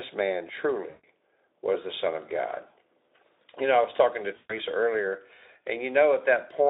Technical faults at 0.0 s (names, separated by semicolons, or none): none